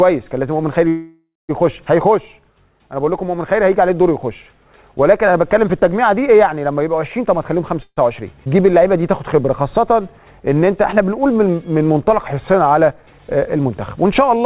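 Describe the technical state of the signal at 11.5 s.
At 11.5 s the audio is inside a jitter buffer slow-down running from 8.48 to 12.64 s. The receiver repeats single pitch periods to rebuild its reserve. This adds 278 ms and plays at 93% speed. Sounds stretch out at unchanged pitch.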